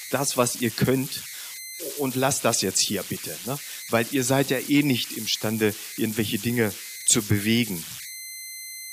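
A delta-sigma converter running without dither has settled into repeating bit patterns whenever its input gets small, producing converter idle tones throughout this speech clip. The result is a tone, around 2 kHz, that surfaces in the pauses between phrases and turns into grainy noise beneath the quieter passages. The error sits only about 12 dB below the signal.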